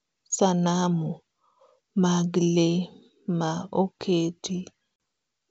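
At 4.96 s, packet loss on an ADPCM call removes about 40 ms, roughly a couple of packets, up to 5.00 s. The lost stretch becomes hard-edged silence, and the decoder's adaptive predictor and step size lose track of the sender's, so the wideband G.722 speech resumes roughly before settling.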